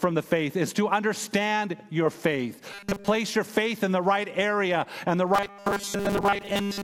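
From 2.73 to 3.08 s, before "your faith in the", and from 5.34 s to the end, after "right area and the", robotic sound from repeated short buffers sets in. It is a rigid 200 Hz metallic buzz, likely a 5 ms buffer looping while most of the real audio is skipped.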